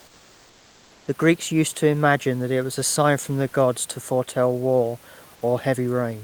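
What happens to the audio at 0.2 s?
At 0.2 s the real background has been replaced by comfort noise, from 0.00 to 1.03 s: steady, featureless hiss, about 2 dB quieter, likely from discontinuous transmission.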